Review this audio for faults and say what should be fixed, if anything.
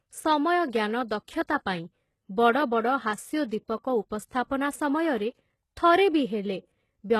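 Throughout the speech, the s sounds come out gritty and lispy, the treble sounds synthetic, and nothing is present above 12.3 kHz. The likely cause is HE-AAC compression, consistent with a low bitrate near 16 kbps: the upper band is rebuilt by copying lower frequencies upward under a coarse envelope, so its harmonics don't match the original. Prevent it by encoding at a higher bitrate or with full-band AAC.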